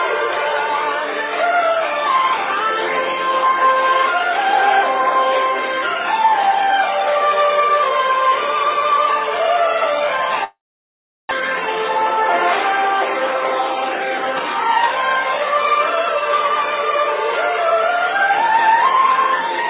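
From 10.44 s to 11.42 s there is a long network dropout, most likely a run of packets lost in transit. The receiver first extends the last sound as a fading buzz or hiss that decays into silence, and the gap comes to nearly a second in all. When audio resumes, a stretch of about 0.6 s is simply gone. The jump lands a few tenths of a second later than the original timing.

From 11.88 s to 14.89 s the jitter buffer speed-up follows, as the receiver drains the excess audio it accumulated around the dropout. It cuts out short pitch-period segments repeatedly, so the sound plays at about 108% speed with unchanged pitch and has a hurried, compressed feel. Roughly a fifth of a second is removed over those three seconds. Throughout the clip, the G.711 call path leaves nothing above 4 kHz.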